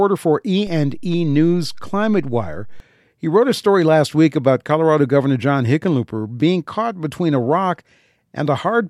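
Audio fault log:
0.67 to 2.8 s, DC step. The zero line of the speech waveform jumps at 0.67 s by about -28 dBFS. That sudden shift is heard as a low thump, since the jump carries energy far below the speech band. The offset then lasts about two seconds. At 2.8 s the offset ends. While it lasts the offset itself is silent. The speech runs on unchanged throughout.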